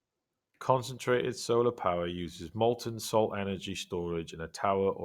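A speech recording with no audible technical faults.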